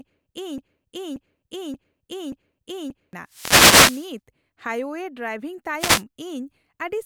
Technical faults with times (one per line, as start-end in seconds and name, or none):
0.00-3.13 broken-record loop
3.26-4.15 wireless microphone noise hit
5.78-6.03 wireless microphone noise hit